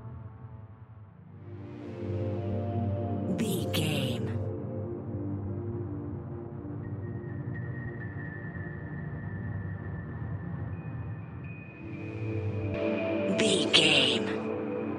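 At 12.74 s the sound abruptly turns duller and boxier, and it stays that way until the end. There is no gap at the transition, but the level shifts by roughly 5 dB, and a faint new noise floor appears about 50 dB below the signal. From that point nothing reaches above 9.8 kHz. This is likely an input switched to a poorer device partway through, with a narrower-band microphone bringing its own tone, gain and background noise.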